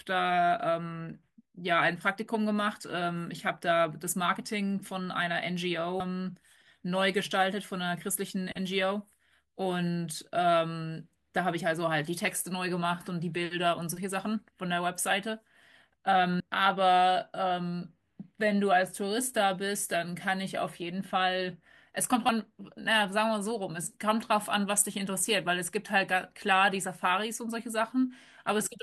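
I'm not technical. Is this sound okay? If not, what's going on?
No. At 6.00 s the speech jumps ahead by about a third of a second, and at 16.40 s and 22.29 s by roughly a sixth. This is compressed frames skipped: whole 32 ms chunks of audio went missing or were rejected as damaged.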